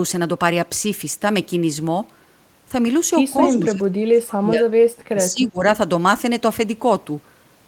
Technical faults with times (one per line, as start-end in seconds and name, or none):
3.37-4.73 speech suppressed in double talk
3.39-3.60 echo leak
5.10-5.64 speech suppressed in double talk